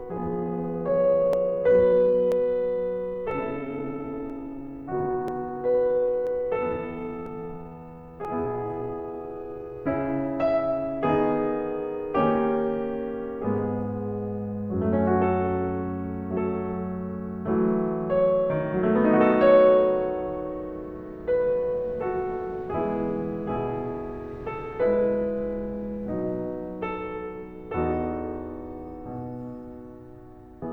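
From the top of the music until 9.78 s, the pace drags to about 0.62 times normal speed while the pitch holds steady. That points to a time-stretched section, likely software fitting the audio to a longer length by repeating short slices to fill the gap. At 9.78 s the tempo snaps back abruptly.

Sitting inside that slowed stretch is a run of tiny skips at 1.33, 2.32, 3.31, 4.30, 5.28, 6.27, 7.26 and 8.25 s, spaced almost exactly a second apart. That regular spacing is the signature of an overlap between stream segments that fits one-second segments. Where neighbouring segments' timestamps overlapped, the player trimmed 5 to 16 milliseconds of audio that wasn't actually duplicated, so the waveform jumps and you hear a tick or tiny skip.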